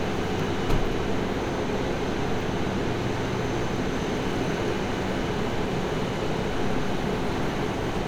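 Sounds, with no technical faults to report.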